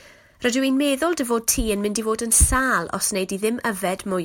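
All the way through this speech there's sample clock jitter: the converter's clock wobbles by a few microseconds, so samples land a touch early or late. That leaves a grainy hiss, roughly 25 dB under the signal, that swells on loud, bright syllables and drops out in the pauses.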